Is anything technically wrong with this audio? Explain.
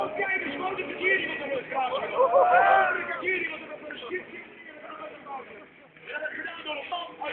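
No, nothing technically wrong can be heard here.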